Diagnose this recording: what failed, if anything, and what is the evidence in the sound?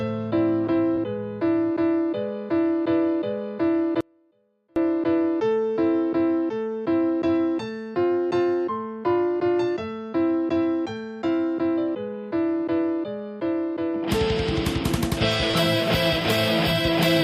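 Short concealed packet loss at 0.95–0.99 s and again at 15.51–15.55 s, a network fault. In each spot about 20 ms of audio failed to reach the decoder in time. The receiver bridged the gap by extending the preceding sound, carrying its pitch forward if it was voiced or substituting shaped noise if it was not, and then cross-faded back into the real stream. What you hear is a brief smear or wobble where continuous detail should be.

Audio dropout to a faint residue from 4.01 to 4.76 s, about 0.75 s long. The sound cuts off abruptly and returns just as suddenly, and the gap is not silent: a faint sound remains, roughly 40 dB below the normal level. That residue shows the path downstream of the break stayed live while the wanted signal was lost. The likely cause is a momentary interruption at the analogue wiring or connection stage feeding an input that remained open.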